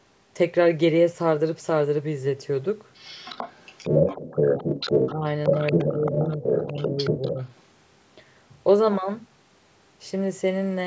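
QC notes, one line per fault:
2.94–5.11 s, 5.44–6.25 s and 6.42–7.46 s, other side's voice leaking through: the echo canceller likely left part of the far-end loudspeaker signal in the microphone feed, so a second voice comes through alongside the speech in these three stretches. In the first two it is about as loud as the talker. In the last it sits roughly 5 dB lower.
5.12–5.25 s, 5.49–5.54 s, 5.73–6.44 s and 6.61–7.39 s, speech suppressed in double talk: with both sides talking over each other, the canceller likely could not tell the local talker from the echo and pulled the whole signal down. The speech dips in level each time, most sharply at the first brief drop, which is around 15 dB. The two longer stretches after 5.7 s sag by roughly 10 dB, and the short one near 5.5 s by only a few dB.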